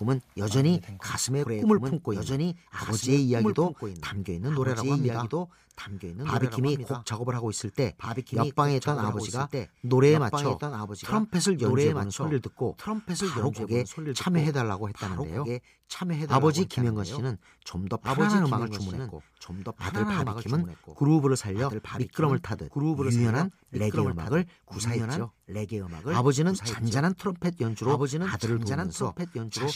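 A speech recording where the signal was likely captured twice through paths of different latency, producing a doubled audio track: a dry copy trails about two seconds behind, around 5 dB quieter, throughout.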